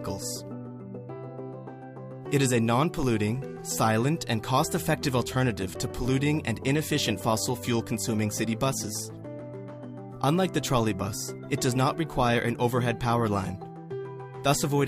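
No technical faults can be heard anywhere in this audio.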